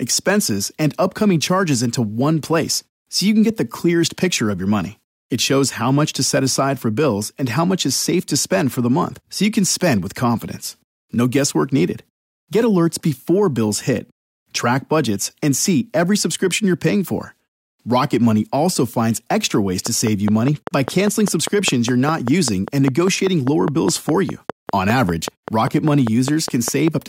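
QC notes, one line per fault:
19.86–26.89 s, train of clicks: a steady tick at about 5 clicks per second, roughly forty in all, each much the same sharp pop and poking well above the sound, about 10 dB over it. Likely interference from nearby gear or a faulty connection or power supply.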